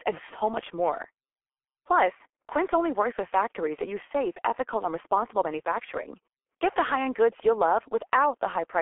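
Throughout the speech, heavy G.723.1 codec damage is present. Nothing survives above 3.7 kHz, and the band sits between 300 Hz and 3.4 kHz. A slowly updated voice model over 30 ms frames leaves a muffled, hoarse tone with smeared consonants, consistent with a 6.3 kbit/s mode.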